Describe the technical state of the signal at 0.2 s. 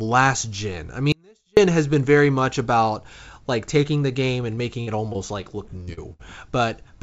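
At 0.2 s the speech is intact, with no fault present, only the steady band limit of the call path, whose G.722 coding leaves nothing above 8 kHz.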